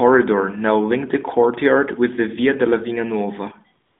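At 3.86 s the sending phone judged the line silent and stopped transmitting speech frames, so for the final 0.14 s, to 3.99 s, the receiver fills in AMR comfort noise: a steady, smooth synthetic hiss switched in to replace the genuine background.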